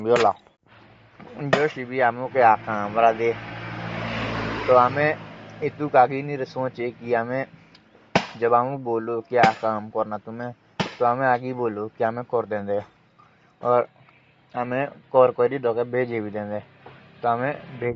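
Throughout, likely Bluetooth LC3 compression, fitting about 32 kbps, removes everything above 7.7 kHz, leaving the speech dull with a plainly audible breathy, grainy edge.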